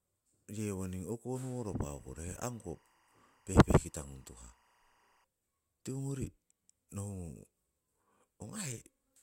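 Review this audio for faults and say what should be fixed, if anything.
From 1.58 to 5.24 s, a faint, steady chirping warble runs behind the speech, about 35 dB down. This is timecode bleed: the linear timecode square wave, flipping between tones near 1 and 2 kHz, leaking in from a neighbouring track or cable. Keep timecode lines separated and shielded from audio paths.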